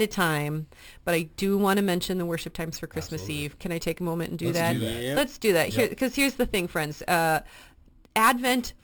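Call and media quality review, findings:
Imaging from sample-and-hold upsampling, full clip. Resampler repeats each sample with no smoothing filter, which fits a 12 kHz source raised to 44.1 kHz. A mirrored copy of the speech fills 6–12 kHz at about −16 dB, producing a metallic fizz that tracks the speech level and moves opposite to the pitch.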